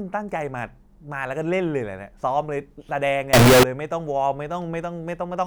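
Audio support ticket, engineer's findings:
Very loud, harsh, near-square blast at 3.33–3.63 s, noise level with speech, pitch still traceable. Float read as integer: 32-bit float samples likely decoded as 32-bit integer.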